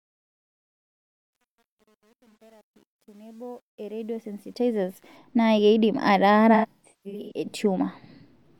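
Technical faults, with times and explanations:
0.0–5.16 s, truncation distortion on a fade: the fade-in rising to full level at 5.16 s is carried through a stage that keeps too few bits and adds no dither, which fits roughly a 9-bit path. Near the bottom of the fade the waveform collapses onto a handful of coarse square steps, so the quiet opening sounds gritty. It is worst from 0.0 to 3.97 s, before the level climbs clear of those steps.
2.31 s, AAC frame loss with concealment: a gap of about 43 ms, consistent with one lost frame, is filled by the decoder from the last good spectrum, leaving a brief smeared, noisy patch.
6.54–7.46 s, AAC frame loss with concealment: about 555 ms of audio is missing in scattered dropouts over 768 ms, pointing to about 13 lost frames. The longest run is around 150 ms. Short gaps sound phasey and smeared, while the longest decays toward silence before fading back in.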